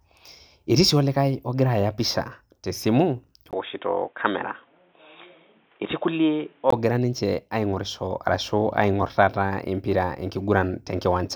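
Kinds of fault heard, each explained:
Input switched to a poorer device: From 3.51 to 6.72 s the speech turns boxy, with nothing above 3.8 kHz, then clears again. A 20 ms gap marks the switch and a faint new noise, roughly 35 dB below the speech, arrives with the dull stretch, while loudness stays the same. That gap and the fresh noise floor separate it from a codec bandwidth drop, pointing to the likely cause: the recording moving onto a narrower-band microphone and back.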